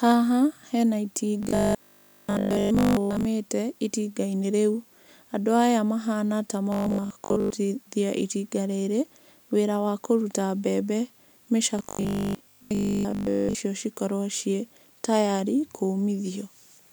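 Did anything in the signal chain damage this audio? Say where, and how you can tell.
Yes. At 1.43–3.31 s, 6.72–7.50 s and 11.79–13.55 s the speech becomes a rigid metallic buzz at 50 Hz: robotic sound from repeated short buffers. A starved driver or buffer likely repeats a 20 ms block, skipping most real audio.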